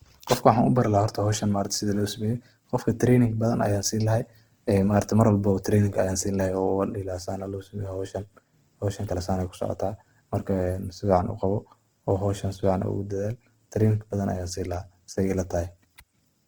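A speech recording, with plainly audible codec damage from start to finish. The tone sounds grainy and rough, with a noisy texture where detail should be. The band stays full, reaching about 20.2 kHz. This points to Opus compression, likely at a low bitrate near 16 kbps in its music mode.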